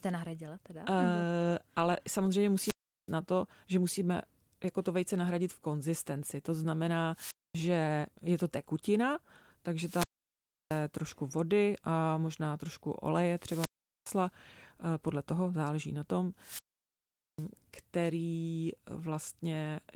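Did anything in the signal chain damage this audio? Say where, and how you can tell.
Yes. There's a wireless microphone squelch dropout in the RF link at 2.54–3.13, 7.13–7.60, 9.78–10.86, 13.31–14.27 and 16.38–17.48 s. The speech fades into hiss, the receiver's squelch cuts in for 0.24–0.80 s of near silence, and then the speech comes back.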